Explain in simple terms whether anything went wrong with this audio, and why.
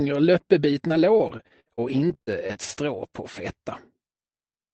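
Repeated packet loss (robotic sound) runs from about 0.87 to 3.2 seconds. Over that stretch, small chunks of the audio arrived late or never arrived, leaving many brief holes, the longest about 58 ms. The receiver patched each hole by stretching the sound just before it, so the audio turns choppy and machine-like. Roughly 440 ms of real audio is missing there, and the call path's 8 kHz limit also trims the highest frequencies.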